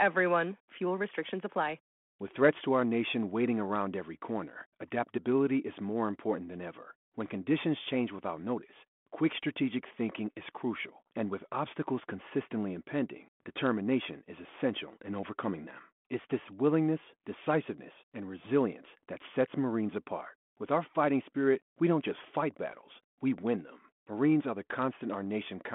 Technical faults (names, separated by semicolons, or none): none